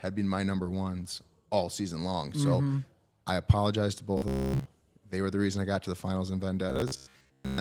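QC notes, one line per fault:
4.18 to 4.67 s and 6.70 to 7.60 s: robotic sound from repeated short buffers. The speech turns into a rigid metallic buzz near 67 Hz, likely from a roughly 15 ms chunk being replayed to cover late audio, so most of the real signal in these spans is skipped and replaced by repeats.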